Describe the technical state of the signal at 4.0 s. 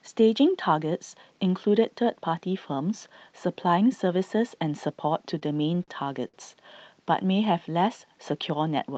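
At 4.0 s the speech is intact, with no fault present, only the ordinary coding character and 8 kHz band limit of the Opus call path it travelled through.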